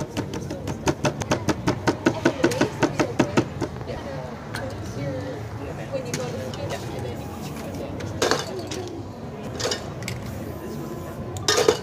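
Skips at 1.22, 3.97 and 9.47 s, each cutting out around 300 ms and splicing straight through without silence, point to audio missing between chunks, likely lost at 3-second block boundaries.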